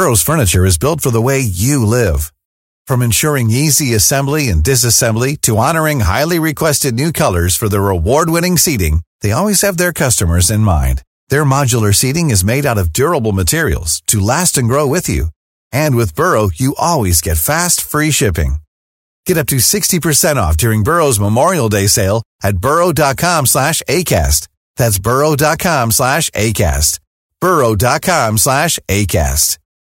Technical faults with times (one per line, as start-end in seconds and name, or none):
0.00-29.88 hard clipping